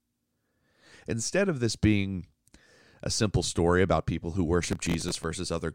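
Near the end of the speech, from about 4.64 to 5.24 s, there's a stretch of processor overload crackle. The machine couldn't finish its audio buffers on time, which points to very short buffers of around 3 ms, and roughly twenty deadlines got missed over that stretch. Each miss replayed a scrap of old audio with hard edges, so you hear a gritty, tearing crackle riding on the sound for about 0.6 s before it clears.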